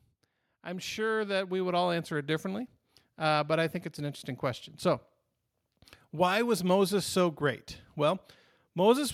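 From 0.48 to 2.76 s, automatic gain rising: the AGC lifts gain by about 9 dB, swelling voice and background together until "uh but I think".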